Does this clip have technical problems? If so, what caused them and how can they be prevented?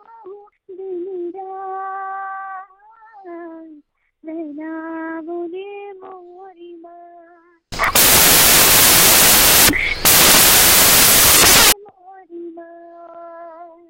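Yes. From 7.72 to 11.72 s the samples are built from the wrong bytes: the reader misassembles each sample's bytes, so fast-changing low bits dominate and the audio turns into loud, harsh broadband noise. Checking byte order and frame alignment against the file header prevents this.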